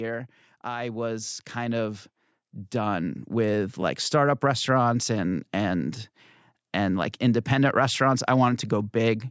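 From 0.64 s to 4.09 s the call's automatic gain control judges the incoming speech too quiet and keeps raising its gain, a slow automatic gain rise of about 10 dB in all. Because the gain acts on the whole signal, the talker and the background noise swell together over those three and a half seconds, rather than the voice simply getting closer. The level settles just before "restaurants and and". Throughout, the band stops at 8 kHz, as expected from call microphone processing.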